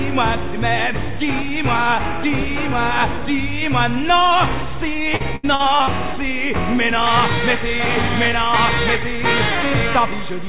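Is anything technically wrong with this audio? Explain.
Yes. From 5.16 to 5.90 s there is repeated packet loss (robotic sound): five gaps, the longest 75 ms, each patched by stretching the last audio. It sounds choppy, with pieces missing. A spectrogram shows smeared, repeated frames and breaks across this span, and the audio, band-limited to 4 kHz by a G.711-style call path, has nothing above that line.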